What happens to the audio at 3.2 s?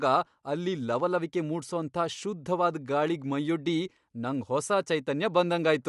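At 3.2 s the speech carries the same grainy, breathy top heard throughout, with nothing above 11.6 kHz. This is likely Bluetooth LC3 compression in 10 ms frames, consistent with roughly 48 kbps. Unlike a plain low-pass filter, the upper band is noise-filled and rough rather than cleanly dull.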